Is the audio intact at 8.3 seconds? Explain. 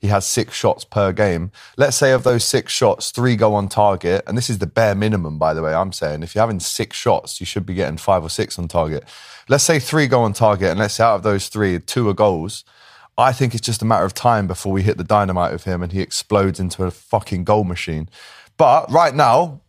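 Yes, at 8.3 seconds the speech runs cleanly, with no dropout, click, distortion or other fault to be heard at that moment.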